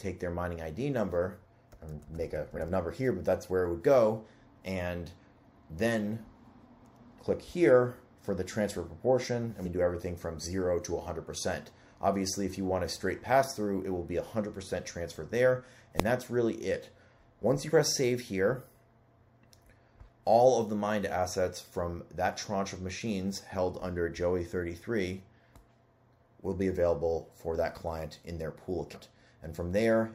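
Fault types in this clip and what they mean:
Compressed frames skipped: Whole chunks of coded audio are never played, so the sound jumps ahead. This happens at 2.56, 9.64, 17.66 and 28.93 s, losing roughly 100, 150, 40 and 150 ms.
Invalid numbers at full scale: A calculation produced invalid values, and the output was forced to its largest positive or negative value. At 16.00 s this lasts only 0.67 ms, which fits a 32-sample block. It is heard as one loud bang, not two separate pops.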